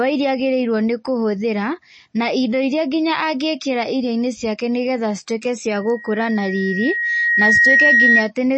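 It's a speech clip, and the whole thing has that watery, swirly quality of MP3 compression, likely from a low bitrate around 32 kbps. The encoder has chopped everything above about 8.4 kHz and is letting weak detail flicker in and out between frames. Then at 5.75 s a loudspeaker feedback squeal kicks in. The mic is hearing its own speaker, and the loop runs away at a single tone near 1.9 kHz. It swells over a couple of seconds until it's roughly 10 dB above the speech, and it holds until 8.31 s.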